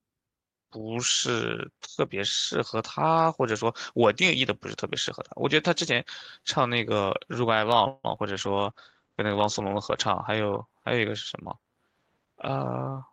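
At 7.87 s a call audio freeze sets in and lasts until 8.06 s. The likely cause is packets stalling in transit so that the jitter buffer drained. The receiver bridged the wait by extending the last sound for about 164 ms as a decaying buzz, with roughly 10 ms of near-silence at the bottom. Nothing of the speech is lost. Everything after the freeze arrives 164 ms later than it would have, so the pause is an insertion rather than a cut.

Right after, between 8.16 and 8.19 s, comes a short concealed packet loss. About 20 ms of the call failed to reach the decoder in time, and the receiver extrapolated roughly 9 ms from the preceding sound before crossfading back into the real signal. It comes across as a quick smear or wobble, and a brief consonant in that spot can disappear.

From 8.32 to 10.74 s there is a call bitrate drop. The bandwidth estimate collapsed and the encoder was pushed from 48 kbps down to 12 kbps, where it stayed for about 1.6 s. 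At that rate the codec quantises coarsely and narrows the audio band from 20 kHz to 8 kHz. The speech turns muffled and watery, losing its sibilant brightness, until the rate climbs back.

Between 12.19 and 13.03 s a jitter buffer speed-up shows. The buffer had accumulated more audio than its target, so the receiver trimmed repeated pitch-period-sized slices, about 70 ms in total, to shrink the delay. Playback runs at about 107% speed with the pitch unchanged, so the speech sounds slightly rushed and clipped in rhythm.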